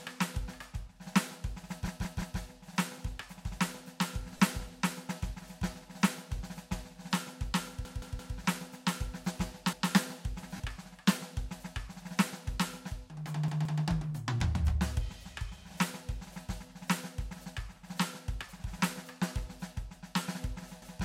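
A music clip with stuttering loops: a slice of about 171 ms plays again with a hard join each time, at 1.88–2.39 s (three extra plays), 7.85–8.36 s (three), 9.73–9.90 s (one), 13.48–13.82 s (two) and 20.82–20.99 s (one). This is a repeated buffer. Fresh audio arrived late, so playback looped the last block, a length that fits an 8192-sample buffer, and the music then resumes with essentially nothing skipped. Twice the tone turns briefly into a grainy, noisy smear, for 22.5 ms at 4.37 s and 37.5 ms at 10.56 s. These are lost LE Audio frames: the LC3 decoder filled the gaps by reusing the previous spectrum with randomised phase, which blurs the music into noise.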